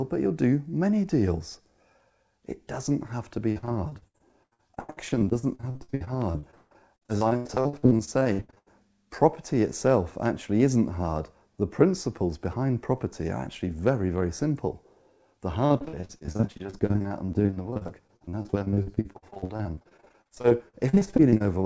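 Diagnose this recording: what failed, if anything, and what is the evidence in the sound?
The failure is at the network stage: repeated packet loss (robotic sound) in two stretches. From 3.52 to 8.68 s, between "doesn't have to be" and "property itself actually", dozens of holes are bridged by stretching the previous sound, covering about 38% of the span, with the longest gap 162 ms. From 15.66 to 21.44 s the gaps are more frequent but shorter, up to 56 ms, with about 33% concealed. The jitter buffer's concealment produces the choppy texture. The band stops at 8 kHz, which fits a wideband call codec such as G.722.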